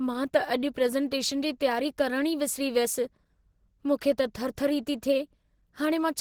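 From start to finish the speech carries plainly audible codec damage, most likely Opus compression at a low bitrate, around 16 kbps. The character points to the encoder running in its hybrid mode, where a speech-oriented layer handles the lower band and a transform layer fills the top. The result is a hoarse, muffled, grainy texture on the speech, even though the bandwidth still reaches about 20.2 kHz.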